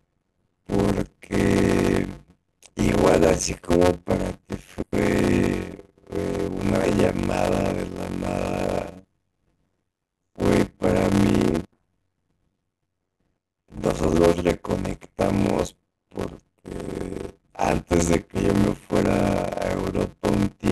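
A steady buzz at about 91.9 Hz runs under the speech for the whole clip, and everything plays at roughly half speed (0.533 times normal) while the timbre stays. This is a block size mismatch (padded). One stage writes blocks that are shorter than the blocks the next stage reads, and the leftover part of each block is filled with silence. The result is a brief gap in every block, repeating at the block rate, which is the buzz you hear. Each block also takes longer to play than the audio it contains, so the speech is stretched in time. The speed ratio fits 256-sample writes being read as blocks of about 480 samples.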